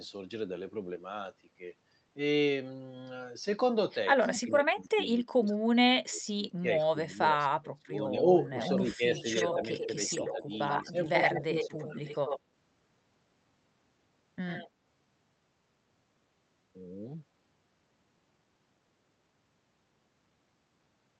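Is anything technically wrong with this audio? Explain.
Yes. There are two problems.

From 4.24 to 8.23 s the speech dips and drops out in pieces for about 2 s in total, falling by up to about 25 dB. Shorter, shallower dips follow at 8.79 to 10.48 s (about 5 dB) and 10.84 to 11.77 s (about 10 dB). This is likely speech suppressed in double talk: with both sides speaking at once, the echo canceller couldn't separate its own talker from the loudspeaker echo and turned everything down.

From 8.45 to 12.4 s a second copy of the speech trails the original by 92 ms, only about 5 dB quieter. A faint burst of it returns at 14.49 to 14.69 s, about 15 dB down. This is likely an echo leak: the far side's echo canceller missed part of what its microphone picked up from the loudspeaker and sent it back.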